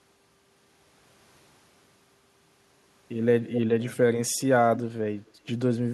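At 3.44 to 3.61 s there's an echo leak: a copy of the speech trailing about 260 ms behind, roughly 10 dB down. It comes back briefly at 4.76 to 4.80 s, a bit quieter, and again at 5.26 to 5.31 s, where it's barely there. The delay holds steady each time, so it's likely a speakerphone whose echo canceller let some of its own playback slip back into the line.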